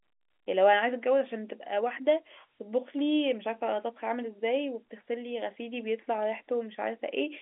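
Nothing's amiss here; the speech just has the narrow, boxy character of an ordinary phone line, thinning out below about 250 Hz and topping out around 3.8 kHz, which is exactly what G.711 telephone coding is meant to sound like.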